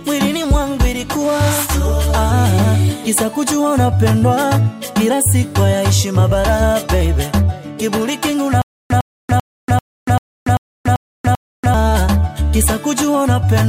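A likely playback stall from 8.62 to 11.74 s causes stutter with silent gaps: one 104 ms burst recurs eight times, separated by 286 ms of silence.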